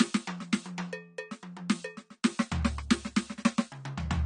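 A short music clip with AAC compression damage the whole way through: nothing above about 9.9 kHz, so it sounds dull, with smeared, warbly texture on sustained parts. That's likely AAC-LC at a low bitrate, which fits roughly 32 kbps, starving the encoder.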